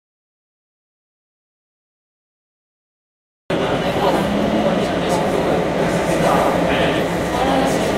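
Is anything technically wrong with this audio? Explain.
Yes, there are two faults.

Audio dropout to silence, from the very start to 3.50 s: the clip opens in silence, with no room tone or hiss, and the sound only arrives at 3.50 s, entering mid-flow rather than fading up. This likely comes from the input being lost, through a disconnected device, a broken link or an accidental mute, while the recorder kept writing silence. Anything that happened during those seconds is simply absent.

Doubled audio track, from 5.79 s to the end: a second full-band copy of the sound appears abruptly, trailing the original by roughly 150 ms and sitting around 5 dB quieter. It carries no reverberant decay or room colouring, so it reads as a clean, distinct repeat rather than an echo. The likely cause is the same signal being mixed in twice, via a slower second capture path or two misaligned copies in an edit.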